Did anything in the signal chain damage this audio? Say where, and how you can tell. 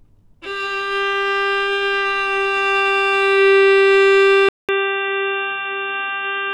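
Yes. At about 4.49 s the sound drops out for roughly 200 ms, then returns dull and boxy for the rest of the clip, with nothing above about 3.8 kHz and a new noise floor sitting about 40 dB under the signal. Loudness stays about the same, so it's not a gain change. That's most likely an input switched to a poorer device at the capture stage: a narrower-band mic or headset path with its own noise took over mid-recording.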